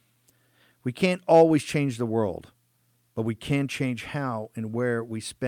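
No technical faults are audible.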